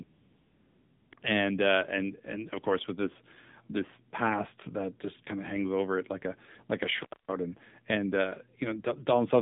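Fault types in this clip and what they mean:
AMR narrowband mobile codec: Throughout, the speech sounds buzzy, thin and somewhat synthetic, with nothing below about 150 Hz or above 3.7 kHz. This is the 2G/3G phone codec, which samples at 8 kHz and rebuilds each 20 ms frame from a vocal-tract model excited by a few pulses. The plainly audible roughness fits one of its lower modes, around 7.4 kbps, where too few bits reach the excitation to keep the voice natural.
AMR comfort noise: From 0.04 to 1.12 s the real background gives way to a smooth, steady synthetic hiss, and it briefly switches back in for single 20 ms frames at 1.14 s and 1.2 s. The phone judged nobody was talking and stopped sending speech frames. The receiver then generated noise from a coarse level-and-spectrum description, so the pause sounds artificially even and the transitions into and out of it are audible as switching.
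Intermittent contact: Between 6.99 and 7.32 s the sound drops out, with crackle where it cuts and returns and only faint residual noise in the gap. A loose plug or cable lost contact and left the line open for roughly a quarter of a second, about 252 ms. The clicks at the edges come from the connection making and breaking unevenly, and are distinct from the smooth codec switching earlier in the clip.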